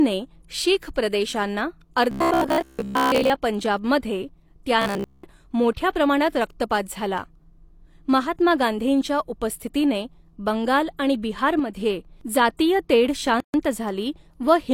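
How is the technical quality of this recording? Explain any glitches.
The recording has three kinds of technical fault. They are heard as two robotic stretches, a short drop in level, and a brief silence.

Robotic sound from repeated short buffers occurs from 2.11 to 3.31 s and from 4.82 to 5.24 s, just before "मोठ्या प्रमाणात". The speech becomes a stiff, metallic buzz near 66.7 Hz. It still roughly tracks the words. The likely cause is audio arriving too late. The software then repeats the last block of about 15 ms to fill in. Most of the sound in these stretches is repeated rather than new.

One channel drops out from 11.59 to 11.76 s. This falls between "गांधींच्या उपस्थितीने बंगाल आणि" and "जातीय तेढ". The level suddenly falls by about 6 dB. It comes back after roughly a sixth of a second. This fits the likely loss of one stereo channel before the mono sum. Content shared by both channels halves in level. 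Anything only in the lost side vanishes.

A gap at a join of encoded pieces appears from 13.40 to 13.54 s, right after "जातीय तेढ". It is a silence of about 138 ms in running speech. Its edges are abrupt but slightly smeared. The pieces were encoded separately and joined untrimmed. The start-up delay and the end padding both remained, and they left this hole. Afterwards the speech resumes where it stopped.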